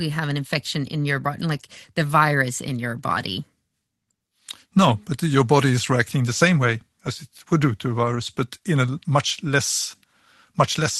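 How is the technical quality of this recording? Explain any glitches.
The speech carries two brief glitches, both a lost packet rebuilt from error correction, heard through an Opus call path with a top cut-off at 12 kHz and the coding character of roughly 24 kbps.

At 3.19 s and again at 8.15 s, a single packet went missing for about 20 ms. The following packet held a low-bitrate backup copy, which the decoder played in its place. Each spot sounds momentarily grainy and noisier, but the speech never breaks. That continuity separates it from a dropout, which leaves a gap, and from concealment, which smears or guesses the sound instead of playing a rough copy of it.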